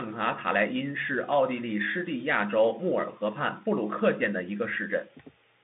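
Speech, with no technical faults to report.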